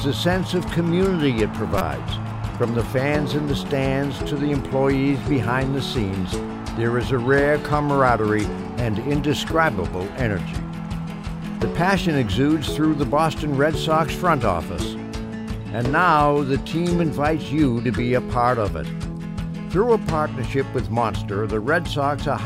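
A corrupt frame decoded at 1.78 to 1.81 s puts a roughly 30 ms chirp-like burst into the sound, peaking near -5 dBFS. Flipped bits in one compressed frame scattered energy across wrong frequencies, showing as a narrow vertical smear on the spectrogram and a sharp spike in the waveform.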